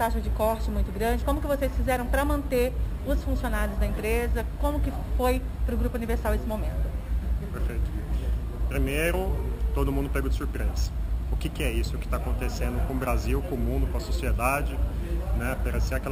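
Imaging from sample-and-hold upsampling runs throughout. Mirrored spectrum copies fill 6 to 12 kHz as metallic fizz, about 24 dB down. This fits unsmoothed repetition of 12 kHz samples.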